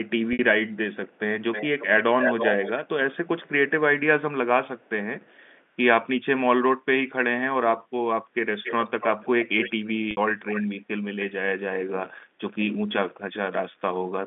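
At 0.33 s, about 60 ms of audio drops out, which fits two lost packets. This is packet loss with pitch repetition: the receiver repeats the last pitch period to fill the gap, so the sound holds briefly on a slightly buzzy, sustained tone before normal audio resumes.

From 1.09 s, a delayed copy of the talker returns. An echo leak is the likely cause, with a loudspeaker-side echo canceller passing residue back. The echo appears at 1.09, 1.52, 2.21, 4.79, 5.24, 8.63, 9.44 and 10.45 s, delayed by 366 ms first, then 315 ms and later 282 ms. It ranges from barely audible to roughly as loud as the direct sound around 2.21 s.

At 10.11 s, a second packet loss with pitch repetition bridges another 60 ms gap with the same brief held buzz. All of this sits within the 200 Hz to 3.6 kHz G.711 telephone band.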